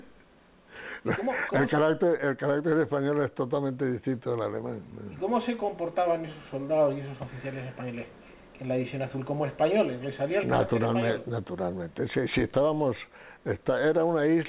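No faults are audible; the sound comes over a WebRTC call path that fits G.711 mu-law at 64 kbps, with nothing present above 4 kHz.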